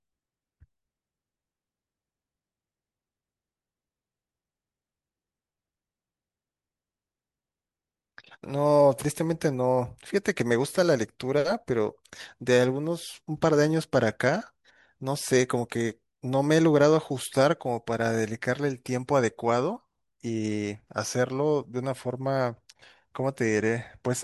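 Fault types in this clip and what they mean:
No technical faults can be heard in this recording.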